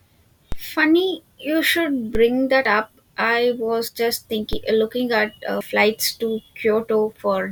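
At 0.52 s, 2.15 s and 4.53 s, DC steps shift the waveform's zero line, each a low thump that decays away through a roughly 5 Hz high-pass. At 2.65 s and 5.61 s, audio missing between chunks drops about 40 ms as a butt-joined skip, likely lost at 3-second processing chunk boundaries.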